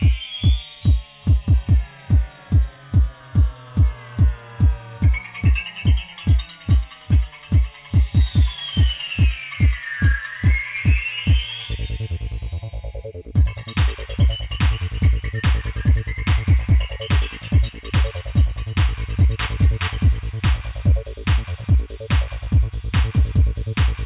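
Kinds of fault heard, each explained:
No technical faults are audible anywhere in the audio.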